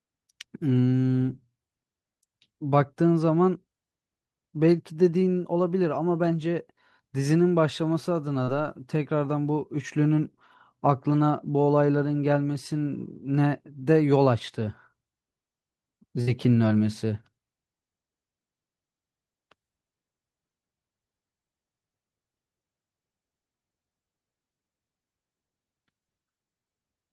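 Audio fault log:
8.43 to 8.49 s, short concealed packet loss: about 40 ms of the speech arrived too late for the decoder, so the receiver covered the hole with about 39 ms of synthetic continuation, extending the preceding sound from its pitch where it was voiced and as shaped noise where it was not, then cross-fading back into the received audio. The result is a brief smear or wobble lasting only a few hundredths of a second, short enough that a quick consonant in that spot can disappear entirely.
16.21 to 16.29 s, burst of packet loss: a longer run of about 60 ms went missing, and the receiver again bridged it with about 59 ms of concealment. Over a gap this long the extrapolated sound is held and progressively attenuated, so a voiced sound turns into a short sustained buzz and an unvoiced one into a fading hiss. When real packets resume, the speech picks up further along, with the material from inside the gap simply absent.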